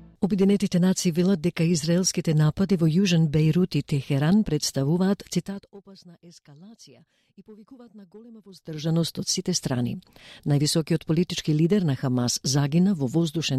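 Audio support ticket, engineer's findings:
Zipper noise, 5.38–5.77 s (level down about 25 dB) and 8.49–8.92 s (back up). Unsmoothed gain stage, about 2 dB steps around 40 a second; ticking rides the fade, unlike a clean fader move.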